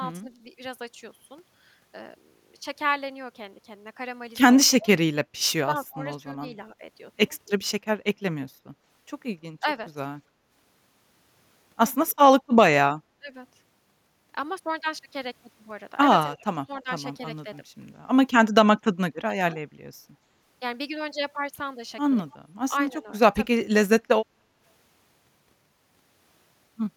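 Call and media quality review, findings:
Speech suppressed in double talk: dips at 4.78–6.82, 9.60–9.67, 13.17–13.35, 16.29–17.46 and 22.47–23.58 s, up to about 25 dB deep. Likely echo canceller attenuating the near talker while the far side speaks.

Echo leak at 12.08–12.15 s: brief faint copy of the speech, about 35 dB down, arriving 277 ms late. Likely residual loudspeaker echo passed through the far-end canceller.

Background gated by the echo canceller at 24.26–24.59 s: room sound drops about 8 dB, then recovers. The canceller clamps the microphone during loudspeaker playback and then releases it.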